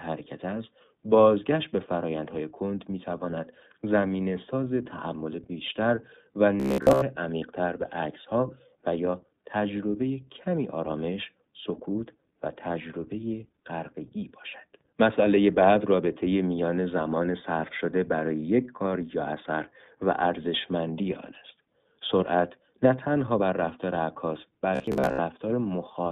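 From start to end the speech is confined to a telephone band of roughly 150 Hz to 3.7 kHz, with a slightly rough, synthetic edge that is plainly audible. That points to the iLBC codec at 15.2 kbps in its 20 ms frame mode, which codes each frame's excitation on its own. The grain stays evenly spread across the whole clip and has no pitch of its own, which separates it from a simple band-limit or from the brief buzz that follows.

From 6.60 to 7.02 s and again from 24.75 to 25.19 s, the speech turns into a rigid, metallic drone fixed at about 67 Hz that only loosely tracks the speech beneath it. This robotic sound from repeated short buffers is likely caused by audio arriving too slowly, so the software loops the last fragment while most of the real signal in each stretch is skipped. A 67 Hz buzz fits a repeated 15 ms buffer. Unlike the codec's constant roughness, it is brief and locked to one pitch.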